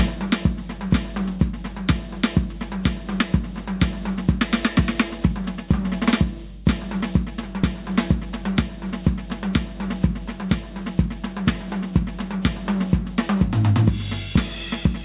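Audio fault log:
throughout gain pumping: likely an overdriven input gain with a fast limiter, so the gain swings roughly 10 dB and loud and soft parts of the music end up closer in level.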